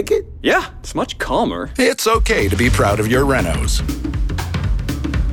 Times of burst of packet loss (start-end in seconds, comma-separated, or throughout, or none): none